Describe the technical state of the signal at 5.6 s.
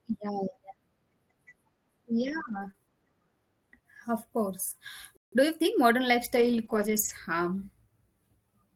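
Hurried speech at normal pitch from 5.32 to 5.94 s: a time-compressed catch-up, with small pieces cut and cross-faded to run about 1.25 times faster.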